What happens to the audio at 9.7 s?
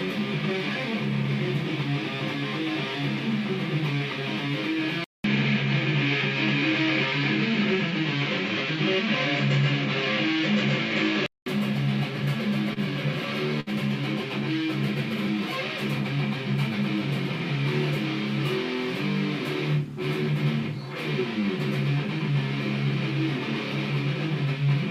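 At 9.7 s you're in the middle of a dull, boxy stretch from 5.04 to 11.46 s. Nothing comes through above 7.6 kHz, the level shifts a few dB, and a faint new noise floor appears, all after a 200 ms gap. It's likely an input switched to a poorer device.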